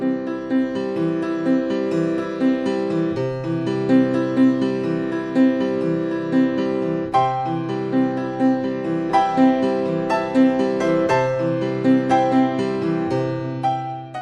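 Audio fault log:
No faults detected across the clip; nothing to log.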